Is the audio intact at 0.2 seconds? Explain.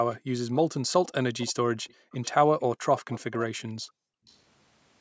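No. Background gated by the echo canceller runs from 0.19 to 0.32 s: while the far-end loudspeaker was playing, the canceller clamped the microphone down by about 40 dB, so the room sound drops out for a brief moment before returning.

Just before this, from 0.12 to 0.19 s, a faint delayed copy of the speech arrives about 363 ms late and well below the main voice. This is likely an echo leak, loudspeaker sound the canceller failed to remove and sent back down the line.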